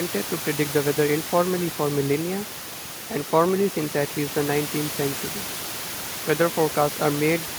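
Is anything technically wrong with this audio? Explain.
Yes. Throughout the clip there is overdone noise removal: a noise reducer set far too aggressively cuts frequency bands near its noise estimate almost to nothing, taking quiet speech detail with them. Room noise sitting about 12 dB below the speech drops and breaks up into twinkling specks.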